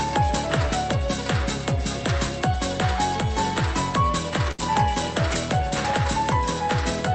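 At 4.51 s a short stall from a late packet holds the sound for about 71 ms, until 4.61 s. The jitter buffer ran dry, so the last sound stretches with a slight buzz or dip, then resumes from the same place. Unlike a dropout, nothing is skipped.

At 4.58 s, 5.30 s and 5.84 s, a lost packet is rebuilt from error correction for 60 ms each time. Opus plays the low-bitrate copy from the following packet, so these frames turn briefly rougher and noisier with no gap and no held sound. The call path's 8 kHz bandwidth limit applies throughout the clip.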